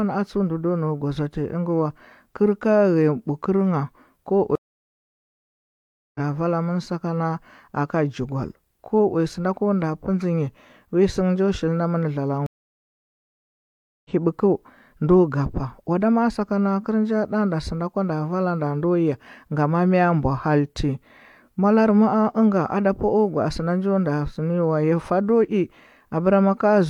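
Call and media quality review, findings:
Stream reconnect, 4.55–6.20 s: about 1.6 s of dead silence, then the sound returns on "vala ngha" at a point roughly one and a half seconds further on. The connection dropped and the player started a fresh decoder mid-stream.

Stream reconnect, 12.46–14.10 s: the same pattern after "shilna mɚna", with about 1.6 s of silence and the material picking up roughly one and a half seconds later. Unlike a buffer underrun or dropout, content is skipped rather than paused and continued.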